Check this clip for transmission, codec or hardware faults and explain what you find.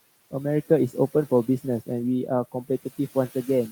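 There is one fault, present from start to finish: noise suppressor artifacts. The background rises and falls with the speech, dropping away in the pauses and swelling back underneath each phrase. A noise suppressor is estimating which frequency bands hold steady noise and pulling them down frame by frame, here by about 14 dB. Because its gain keeps shifting with the speech, the room noise, sitting about 19 dB below the talker, pumps instead of staying steady.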